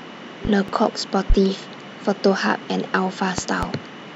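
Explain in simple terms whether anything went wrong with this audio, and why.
A sudden electrical jolt, likely from a plug, switch, static or driver glitch, hit the signal, causing a loud pop: two pops between 0.45 and 0.72 s, one from 1.30 to 1.34 s, then two between 3.38 and 3.66 s, each louder, while the speech continues underneath.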